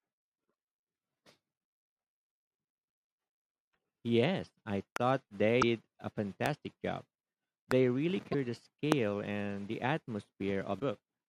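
Loud pops at 4.96–4.98 s, 6.46–6.48 s, 7.71–7.74 s and 8.92–8.94 s are single sharp clicks peaking roughly 15 to 20 dB above the speech, which carries on uninterrupted underneath. They are likely voltage spikes added to the signal.

A broken MP3 bit reservoir glitch occurs at 5.61–5.63 s, 8.32–8.35 s and 10.79–10.81 s. Unlike the pops, the speech itself jumps ahead there, leaving a brief garbled or missing stretch lasting about one 24 ms frame. This is likely caused by dropped frames, so the following frame decodes using borrowed data that no longer matches.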